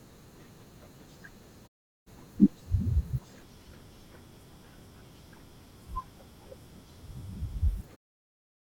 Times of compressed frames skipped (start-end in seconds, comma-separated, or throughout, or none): none